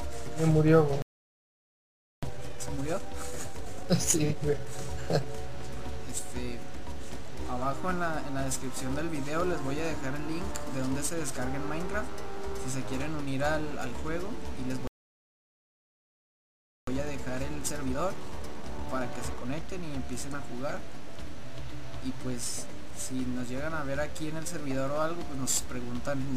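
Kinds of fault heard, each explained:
Playback stall: The audio cuts off mid-flow at 1.02 s and stays silent for about 1.2 s, then stops again at 14.87 s for 2.0 s. The likely cause is the player running short of buffered data or its output thread being blocked. On a waveform each gap is a flat line with abrupt edges. A spectrogram shows a clean vertical band of nothing across all frequencies.
Time-compressed catch-up: Right after each stall the player drains its backlog by cutting tiny pieces out and cross-fading the joins. From 2.23 to 5.23 s the sound runs at about 1.15 times normal speed, and from 16.87 to 19.87 s at about 1.1 times. Pitch stays put, but the sound feels hurried. A spectrogram shows harmonics at unchanged heights with events packed closer together, and slight smearing at the splice points.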